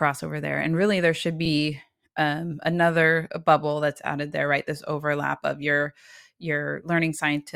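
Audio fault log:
1.45–1.49 s: repeated frames. A 40 ms slice of the speech plays a second time, so you get a quick stutter, as if the stream jumped back and decoded the same compressed block again. The clip runs 40 ms longer because of it.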